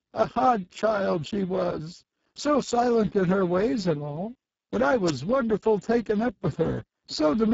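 Throughout, heavy Speex codec damage leaves the speech noisy and hoarse, consistent with a very low bitrate around 5.8 kbps. The spectrogram shows nothing above a sharp ceiling at 7.7 kHz.

From 5.06 to 5.11 s comes a wireless microphone noise hit. The radio signal fades, and receiver noise rises into a short swish of static. It appears as a brief broadband vertical smear on the spectrogram and as a fuzzy burst in the waveform.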